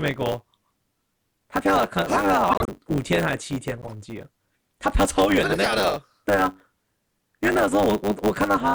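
Throughout the speech, a block size mismatch (truncated) produces a steady 100 Hz buzz as the tail of each block is discarded. The audio runs 1.09 times fast at roughly normal pitch, which distinguishes it from a resampling error, where pitch would rise too.

Corrupt frames decoded at 2.50–2.69 s, 3.81–3.93 s and 4.92 s put energy at wrong frequencies. The first burst is loud, peaking around -5 dBFS, the second moderate and the third faint. Each is a chirp or burst lasting about as long as the damaged frames.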